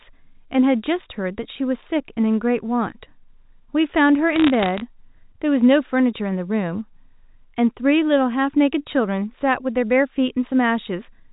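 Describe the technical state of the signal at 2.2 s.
At 2.2 s the speech is intact, carried through G.711 telephone coding with nothing above 4 kHz and no fault at that moment.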